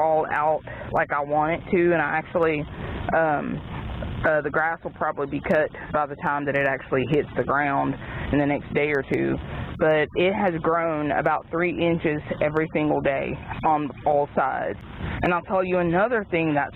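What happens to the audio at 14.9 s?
Gain pumping is present at 14.9 s, as it is throughout the clip. The gain is pulled down on every loud sound, a swing of about 25 dB, most likely from excessive input gain with a fast limiter clamping down, leaving the sound squashed.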